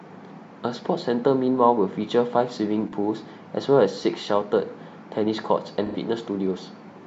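Two short AAC frame loss with concealment patches, at 2.87 s (about 43 ms, one frame's worth) and 5.85 to 5.96 s, where the decoder patches gaps from recent spectrum, leaving a smeared, phasey blip.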